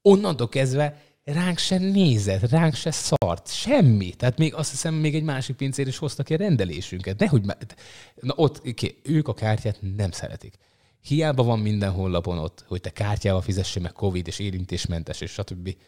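At 3.16 s a gap at a join of encoded pieces opens. Separately encoded sections were joined untrimmed. The speech drops out for 58 ms, then resumes.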